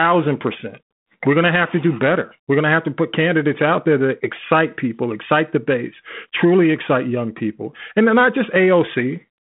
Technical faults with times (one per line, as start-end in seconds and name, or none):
none